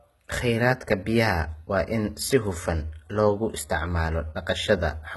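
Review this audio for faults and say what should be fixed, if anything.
The whole clip has a synthetic, gritty top end that's likely from HE-AAC compression at a very low bitrate. The treble is rebuilt from copied lower bands instead of coded, so the s sounds come out lispy and metallic, and nothing's left above 11.8 kHz. To prevent it, encode at a higher bitrate, or use plain AAC or Opus so the treble is coded directly.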